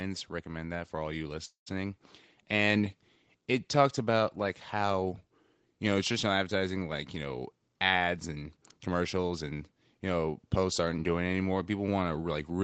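From 0.43 to 2.92 s there is automatic gain rising. The level climbs by about 7 dB over roughly two and a half seconds. The gain control judged the input too quiet and raised it step by step. Speech and background noise swell together, so the room noise grows along with the talker. The rise settles just before "it talked about like".

Inside that swell, at 1.45 s, the sound stalls for 0.21 s. The last sound trails on briefly as a fading fill, then drops to silence for about 0.12 s. Speech resumes exactly where it stopped, with nothing lost. This is likely a call audio freeze: packets arrived late, the jitter buffer ran dry, and the receiver padded the wait. The pause adds 0.21 s of delay.

From 7.25 to 9.43 s, between "traditional advertising like you" and "and you know posts", there is a jitter buffer speed-up. The buffer was holding more audio than it wanted. The receiver cut many tiny pitch-period slices, about a fifth of a second in total. 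Speech runs at 109% of normal speed with the pitch unchanged, so this stretch sounds hurried. The Opus call path limits everything above 8 kHz throughout.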